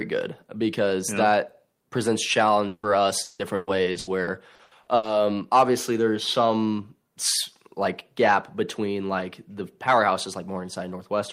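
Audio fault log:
2.67–2.86 s: long network dropout, after "because yeah that presents"; about 160 ms likely never arrived, so the last sound is stretched into a fading buzz instead of cutting to silence.
3.23–5.06 s: repeated packet loss (robotic sound), before "obviously there's some"; nine short holes, the longest 160 ms, patched over 37% of the stretch, giving choppy sound with pieces missing rather than one gap.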